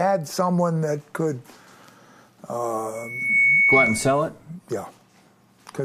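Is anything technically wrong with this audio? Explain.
Yes. From 2.95 to 4.2 s there's loudspeaker feedback squeal: the mic hears its own speaker, and a 2.2 kHz tone swells over a bit under half a second to roughly 10 dB above the sound.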